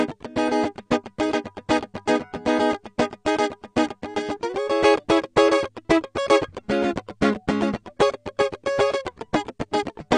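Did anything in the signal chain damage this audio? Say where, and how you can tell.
Yes, at the codec stage. Throughout the music there is nothing above about 9.8 kHz, and the damage is plainly audible: dull, smeared highs with a warbling, fizzy texture on sustained tones. This is likely AAC compression, consistent with AAC-LC at a low bitrate around 32 kbps. Starved of bits, the encoder lowered its cut-off and coarsely quantised what remained. A simple low-pass filter would also remove the top, but it would not add this swirling, unstable texture below the cut-off.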